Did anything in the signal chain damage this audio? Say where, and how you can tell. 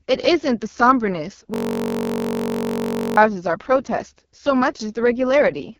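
Yes. The AMR wideband (HD Voice) codec damage runs through the whole clip, at the codec stage. The speech is rough and raspy, and nothing sits above 7 kHz. That heavy roughness fits AMR-WB's lowest 6.6 kbit/s mode, where the pulse-driven vocal tract model is starved of bits.

A system hang loop runs from 1.54 to 3.17 s, at the driver or buffer stage. One 21.33 ms slice repeats exactly, about 77 times, giving a steady buzz at 46.9 Hz. The machine stalled while the hardware kept replaying its ring buffer, which fits a 1024-sample buffer.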